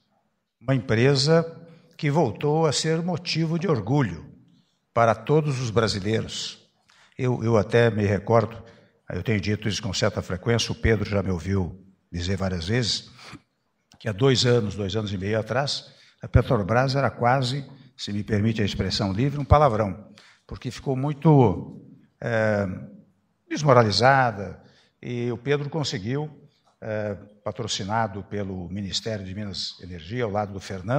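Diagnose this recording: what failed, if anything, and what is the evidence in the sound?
Nothing stood out on listening, and no stage of the chain gave any audible sign of trouble.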